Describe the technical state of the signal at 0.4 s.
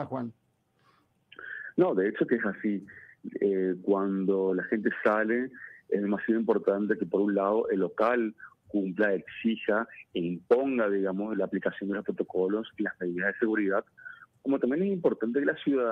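At 0.4 s the sound sags in level, dipping by as much as about 12 dB, with sustained and decaying parts pulled down hardest. This is sound cut by the noise suppressor, which mistook the signal for noise between 0.33 and 1.34 s and attenuated it.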